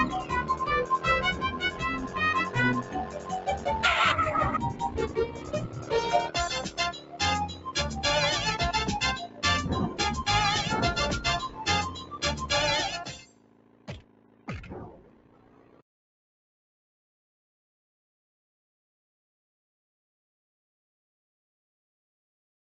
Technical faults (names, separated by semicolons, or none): noise suppressor applied to music or sounds; sound cut by the noise suppressor